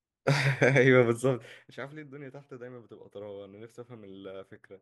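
From 1.03 to 2.18 s, zipper noise: the speech level drops by roughly 15 dB in unsmoothed 1 dB steps, about fifteen per second, each leaving an audible tick.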